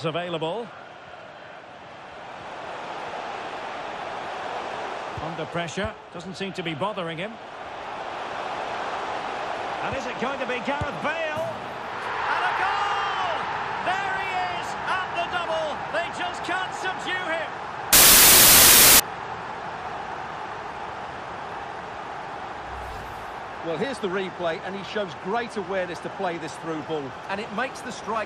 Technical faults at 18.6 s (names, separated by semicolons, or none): samples built from the wrong bytes